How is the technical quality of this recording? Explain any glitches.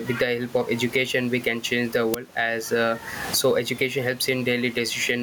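The recording has two technical faults: constant gain pumping and one loud digital burst.

Gain pumping runs through the whole clip. The level swings by roughly 15 dB. The likely cause is input gain set far too high, with a fast limiter or compressor clamping down on each loud syllable. In the pauses the gain recovers, so the room noise, about 28 dB below the speech, swells up. It then ducks again when speech returns. The speech sounds squashed and breathes with the background.

An uninitialised buffer is heard at 2.14 s, right after "we can change the". It is a sharp, loud crack of digital noise lasting about 5 ms, which fits a 256-sample block. The playback path sent that block out before any audio had been written into it. Whatever was left in memory was played as samples. The result is a harsh click with no relation to the surrounding speech.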